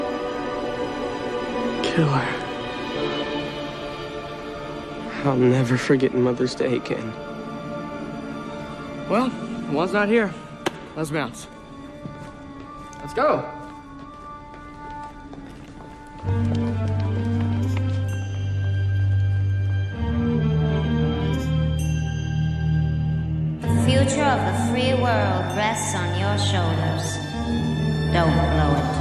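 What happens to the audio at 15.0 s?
Nothing goes wrong at 15.0 s; the audio plays through that moment intact, with no dropout, click or distortion.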